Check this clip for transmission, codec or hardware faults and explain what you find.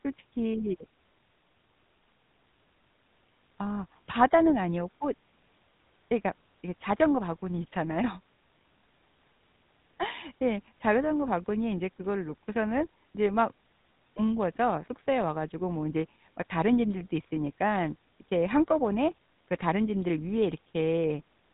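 There's one fault, and it runs the whole length: GSM full-rate codec damage, plainly audible. The codec models the vocal tract and excites it with evenly spaced pulses built from only every third sample, so the speech comes out buzzy and gravelly, capped at 4 kHz, which fits 13 kbps full-rate GSM.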